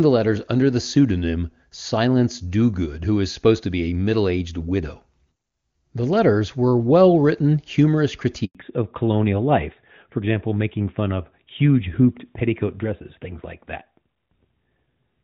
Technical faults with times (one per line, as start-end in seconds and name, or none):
8.45-8.55 handover gap
8.55-15.23 fallback to narrowband